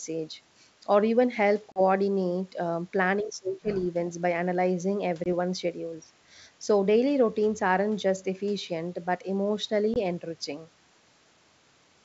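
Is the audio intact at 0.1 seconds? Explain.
Yes, at 0.1 s the speech is intact, with no fault at that moment.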